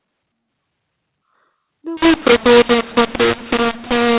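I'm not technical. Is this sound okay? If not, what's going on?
No. From about 1.97 s to the end, the speech turns harsh and gritty. This is a mu-law and A-law mix-up. The telephone audio was stored one way (A-law) but played back the other (mu-law). Loudness gets scrambled, and pauses fill with hiss.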